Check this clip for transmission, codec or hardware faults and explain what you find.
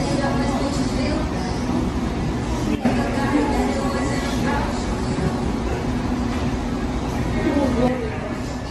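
Two faults are present: generation loss throughout, and two sudden gain jumps.

Generation loss runs through the whole clip. The sound is swirly, smeared and hollow, and attacks blur. Nothing is heard above 14 kHz. The likely cause is repeated lossy re-encoding, around ten passes, which fits AAC-LC at 64 kbit/s. Each pass requantises on a shifted frame grid, so the errors compound.

A sudden gain jump occurs at 2.75 s. The level drops by about 9 dB and returns at 2.85 s. At 7.88 s it drops by about 6 dB and stays there to the end. The background noise steps with the sound each time. The likely cause is a digital gain change applied without a ramp.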